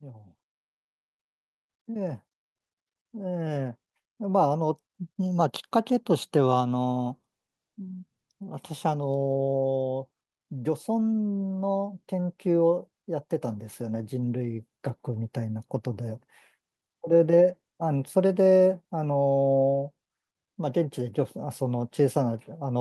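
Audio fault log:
0.05–4.53 s, automatic gain rising: the gain control judged the incoming speech too quiet and raised its gain gradually, by about 8 dB over roughly four and a half seconds, so the voice and the background swell louder together rather than the voice alone.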